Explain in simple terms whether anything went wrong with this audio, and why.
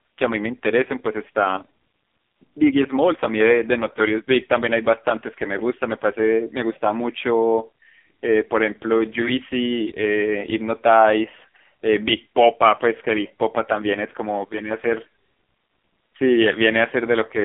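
The speech went through an AMR narrowband mobile codec, the compression used on older phone calls, set to very few bits for the whole clip. Nothing above 3.8 kHz gets through, so from start to finish the voice sounds thin, muffled, buzzy and synthetic.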